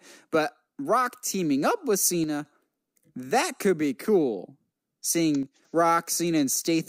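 A speech recording with two brief level dips, at 2.24 to 2.45 s just after "teaming up with" and again at 5.43 to 5.62 s. In each, the sound falls abruptly by about 6 dB for roughly 0.2 s, then snaps back. The likely cause is one channel dropping out, halving the mono sum. On a waveform the envelope steps down to half height with square edges; a spectrogram shows a uniform darkening across all frequencies.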